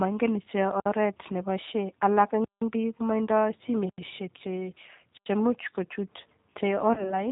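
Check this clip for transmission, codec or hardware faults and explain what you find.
Two faults are present: a low-rate speech codec throughout, and one concealed packet loss near the end.

Throughout, the G.729 codec at 8 kbit/s rebuilds speech from a filter and sparse pulses, leaving it band-limited below 4 kHz and plainly rough. Unlike generic lowpass filtering, it has a synthetic texture.

From 6.94 to 7.17 s there is VoIP packet loss concealed by the speech codec. About 30 ms went missing, which fits one lost packet. The decoder stretched its last pitch and filter into a fading sound, and the voice stays weakened for about 0.2 s. Unlike a plain dropout, there is no silent gap.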